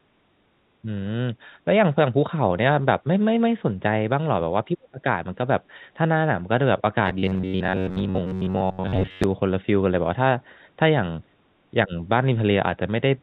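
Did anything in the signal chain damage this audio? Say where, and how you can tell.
Yes. Speech suppressed in double talk occurs at 4.71 to 5.04 s and again at 11.86 to 11.93 s, in call processing. The speech drops by about 40 dB for roughly a third of a second, then briefly by about 15 dB. The likely cause is an echo canceller that could not separate near speech from loudspeaker echo while both sides talked, so it attenuated both.

Robotic sound from repeated short buffers runs from 7.06 to 9.24 s, at the driver or buffer stage. The speech turns into a rigid metallic buzz at 93.8 Hz, with most of the stretch made of repeats rather than new audio. That rate fits a block of about 10.7 ms replayed over and over, likely because fresh audio arrived too seldom.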